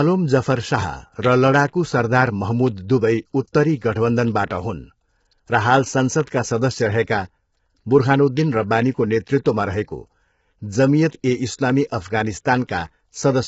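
Throughout the speech, the voice sounds rough and grainy, with hiss filling the gaps between harmonics and nothing above 7.7 kHz. The likely cause is low-delay AAC compression at a bitrate near 16 kbps. A spectrogram shows smeared, noisy harmonic bands under a hard ceiling.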